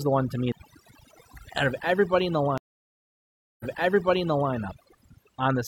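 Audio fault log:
throughout, overdone noise removal: a noise reducer set far too strong cuts frequency bands near its noise estimate, leaving near-silent background with twinkling specks.
0.52 s, CD skip: the laser jumped to another turn of the disc's spiral, giving a brief mute of a few milliseconds, a tick, and an abrupt jump in the speech.
2.58–4.52 s, stream reconnect: the connection dropped and the decoder restarted, leaving about 1.02 s of silence before the speech resumes 0.93 s earlier, repeating material already heard.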